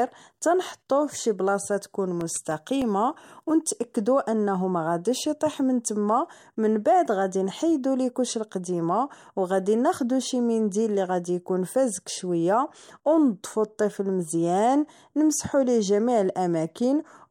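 From 2.06 to 2.97 s, after "تنحطوه فشي بلاصة", CD scratch ticks: seven brief clicks from unrecoverable disc errors, seen as thin vertical spectrogram lines and brief waveform gaps.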